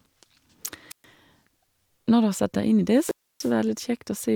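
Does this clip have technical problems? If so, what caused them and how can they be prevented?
Yes. At 0.90 to 1.04 s and again at 2.94 to 3.54 s, hiss swells, then the sound drops to near silence for about 120 ms and 290 ms before the speech returns. This is a wireless microphone squelch dropout: the analogue FM signal weakened until the receiver's squelch muted it. Keep the transmitter close to the receiver, in line of sight, with fresh batteries and well-placed antennas.

At 3.09 s, inside the second dropout, there is a tiny skip where a few milliseconds go missing and the waveform jumps. This is overlap between stream segments: timestamps of adjacent 2.0 s segments overlapped, so the player trimmed real audio at the boundary. Generate segment timestamps from a single continuous sample clock so boundaries meet exactly.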